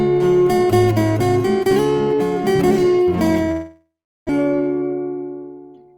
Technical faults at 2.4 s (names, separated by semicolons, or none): none